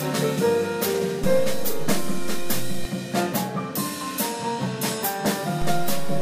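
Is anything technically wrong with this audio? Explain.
Yes. A DC step, where the waveform's zero line suddenly jumps, occurs at 1.24 s, stepping back at 2.85 s, and again at 5.62 s, holding to the end. Each offset, about −19 and −18 dBFS, is heard as a low thump, and on the waveform the whole trace visibly shifts off centre.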